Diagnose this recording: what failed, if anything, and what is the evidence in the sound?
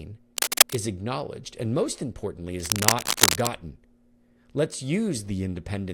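Dense, uneven scratching rides over the speech from 0.37 to 0.76 s, before "acknowledged and most importantly", and from 2.6 to 3.54 s after it, louder than the speech. This is cable scratch noise in the analogue wiring, likely a moving worn connector whose contact resistance jumps rapidly.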